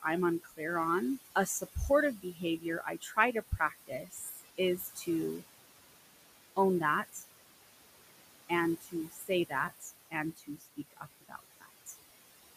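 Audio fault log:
throughout: noise suppressor artifacts. The suppressor judges which frequency bands hold steady noise and pulls them down frame by frame, here by about 19 dB. The room noise, sitting about 13 dB below the speech, sinks in the gaps and swells back under each phrase, so the background pumps in step with talking.
0.40–0.61 s, 1.35–5.08 s, 7.03–7.24 s, 8.49–11.95 s: speech cut by the noise suppressor. In these stretches the suppressor mistook parts of the speech for noise and attenuated them with the background, by about 17, 18, 14 and 21 dB at the deepest. The first and third spans lose only a brief moment each, around 150 ms and 100 ms. The two long spans lose roughly a second and a half apiece in scattered pieces. Soft consonants and word endings sound swallowed or faint.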